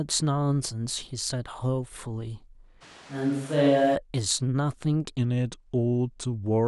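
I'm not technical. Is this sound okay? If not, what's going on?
No. From 2.83 to 3.94 s the close microphone's signal likely dropped out, leaving a switch to a distant microphone. The voice abruptly turns roomy and hollow, with less bass and some room noise underneath, though it stays about as loud, then snaps back.

From 5.18 s to the end there is a section at the wrong speed, likely from playback tied to the wrong clock. It runs at 0.884 times normal speed, so the voice sounds slower and roughly two semitones deeper.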